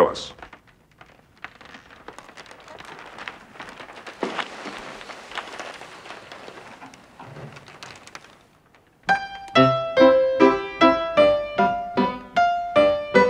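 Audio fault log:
No fault appears anywhere in the audio.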